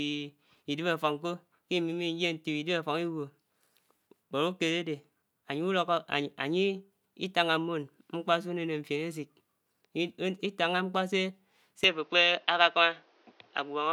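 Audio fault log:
11.84–13.92 s, input switched to a poorer device: the speech suddenly loses everything above 6.5 kHz and turns dull, with a faint new background noise well below it but no gap or level jump, likely a switch to a narrower-band microphone.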